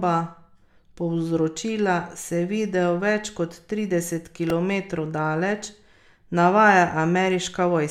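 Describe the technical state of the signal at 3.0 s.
At 3.0 s the speech signal is intact, with no dropout, clipping, glitch or other fault to be heard at that moment.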